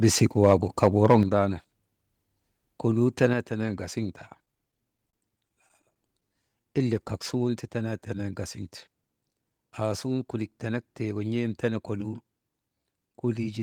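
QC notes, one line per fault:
0.22–0.54 s, 0.83–1.17 s and 3.23–3.25 s, microphone overload: speech peaks are flattened with a harsh crackle, exceeding the limit by about 2, 4 and 1 dB. The likely cause is input gain set too high.
1.23 s and 3.33 s, microphone volume stepped down: level drops abruptly, about 6 dB then about 4 dB, right after the distorted peaks. Software likely reduced the input gain.
4.45–6.25 s, repeated stalls (stutter): twelve short gaps, longest 28 ms, are bridged by stretching the preceding sound. Nothing is lost, but speech drags and stutters.
6.29–7.20 s, jitter buffer slow-down: speech runs at 93% speed with 70 ms added before "suŋun ti tenenen". Repeated pitch periods keep the pitch steady.
9.26–9.59 s, jitter buffer speed-up: speech hurries to 115% speed at unchanged pitch. About 50 ms of short pitch-period slices are removed to reduce delay.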